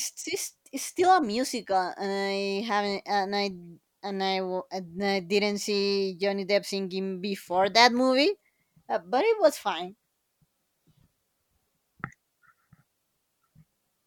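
At 6.22 s, after "didn't see", a faint, sharp snap lands on the speech: an electrical switching spike, likely a nearby switch arcing into the line.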